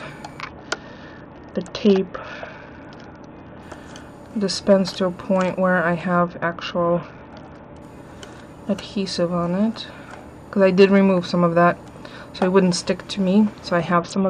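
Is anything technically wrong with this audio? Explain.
Yes, there's a Bluetooth SBC bit pool drop, three times: 0.41 to 3.63 s, 6.19 to 7.82 s, and from 13.93 s to the end. Each time the top end goes dull and a gritty noise creeps in; the first two clear when the rate recovers. It sounds like the link got congested and the encoder cut its bit pool from around 28 to about 7, roughly 66 kbps, so the high sub-bands starve and everything left gets coarsely quantised.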